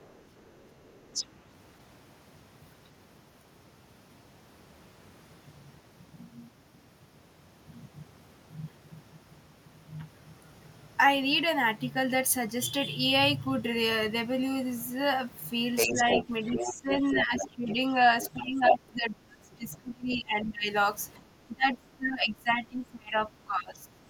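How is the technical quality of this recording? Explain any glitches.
The recording is marred by echo-control trouble, mostly in its second half, with two related faults.

Other side's voice leaking through, at 0.0–1.26 s, 15.76–17.73 s, 18.22–18.31 s, 18.67–18.74 s and 19.73–19.78 s: the far party, played on a loudspeaker, was likely not fully cancelled from the microphone. It ranges from faint at the start to briefly louder than the talker near 18.7 s.

Speech suppressed in double talk, at 15.87–17.98 s, 18.34–20.69 s and 21.18–24.0 s: with both sides talking, the canceller likely turned everything down. The talker's speech dips by about 10 dB in the first stretch and by roughly 25 dB later.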